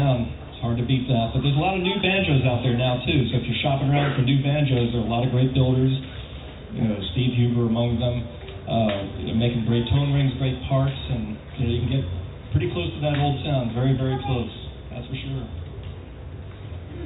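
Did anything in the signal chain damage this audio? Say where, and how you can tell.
No, nothing in the signal chain damaged this audio; it passed through a WebRTC call path on G.711 A-law at 64 kbps, which leaves nothing above 4 kHz, as that codec normally does.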